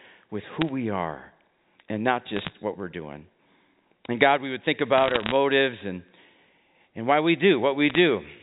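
Bit errors on a digital phone line flip roughly 0.4 to 0.5 percent of bits, corrupting single samples, so sharp ticks and crackle break over the speech at 0.61–0.69 s, 2.36–2.54 s, 4.98–5.32 s and 7.90–7.98 s.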